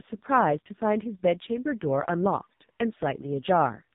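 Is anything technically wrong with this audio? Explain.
Yes, there are two faults.

Throughout, the speech has AMR narrowband mobile codec damage. Nothing passes above 3.8 kHz. The very low bitrate, which fits the 5.15 kbps mode, leaves the voice heavily buzzy and synthetic.

From 1.52 to 3.52 s, there is timecode bleed. A 24-frame code leaks in. It sounds like a faint chirping warble, switching near 1 and 2 kHz, well below the speech.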